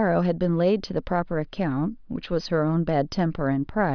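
Listening to this speech recording, nothing technical stood out.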